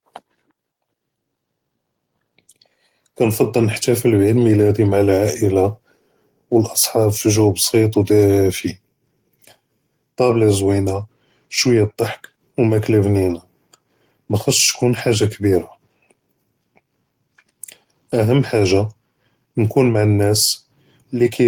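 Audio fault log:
No faults heard.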